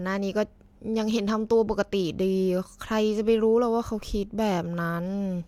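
No technical faults are audible in this speech recording.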